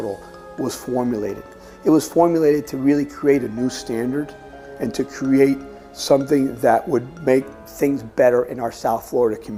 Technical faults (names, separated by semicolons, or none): drift correction step